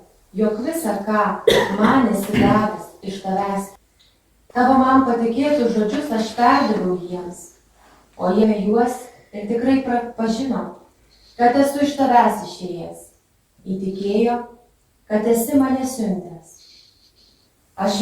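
At 8.43 to 8.45 s the audio has a skip ahead: about 0.4 s of sound is missing, and the two sides join almost directly with no silence or filler. That separates it from a dropout or concealed packet loss, where a gap or smeared stretch would be heard. Right after, from 8.55 to 11.09 s, a jitter buffer speed-up runs the sound about 4% fast by repeatedly trimming pitch-period-sized pieces, removing roughly a tenth of a second in total. The pitch stays put, so this is time compression rather than resampling, which would raise the pitch too.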